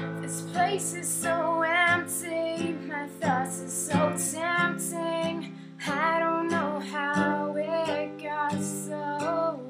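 No technical faults can be heard anywhere in the audio.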